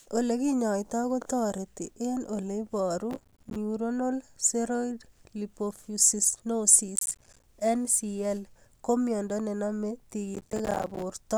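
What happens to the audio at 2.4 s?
Nothing goes wrong at 2.4 s; the speech carries straight through that moment with no dropout, click or other fault.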